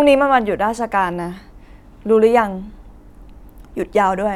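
Speech recording with no audible technical faults.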